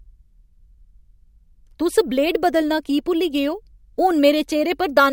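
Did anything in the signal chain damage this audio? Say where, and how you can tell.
Yes. A crude rate conversion at the sample-rate conversion stage repeated samples with no filtering, which fits a 32 kHz source stepped up to 48 kHz. Throughout the speech, an inharmonic gritty fizz sits roughly 25 dB below the signal, tracking loud and bright sounds.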